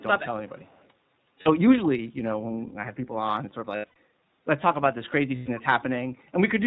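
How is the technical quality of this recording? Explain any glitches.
The speech has a steady narrowband, slightly rough and synthetic quality, with three short buzzy dropouts.

Throughout, the speech sounds muffled and faintly synthetic, with nothing above 4 kHz. This is the iLBC codec, whose coarse, plainly audible coding fits its 15.2 kbps, 20 ms-frame mode.

At 1.42 to 1.49 s, 3.76 to 3.96 s and 5.36 to 5.50 s, the speech turns into a held, buzzy vowel-like sound and then recovers almost immediately. These are lost iLBC frames. The decoder repeats the last pitch cycle mixed with noise to fill about 40 ms, 180 ms and 120 ms of missing audio. The middle gap is broken up over about 200 ms, with its longest run around a tenth of a second. The call microphone processing's removal of the lowest bass is normal and not a fault.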